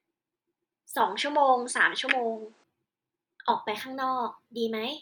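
An input switch to a poorer device, likely, runs from 1.00 to 2.64 s: the speech abruptly loses everything above 9.6 kHz, shifts noticeably in level, and gains a faint new noise floor, with no gap at either switch, before the fuller sound returns.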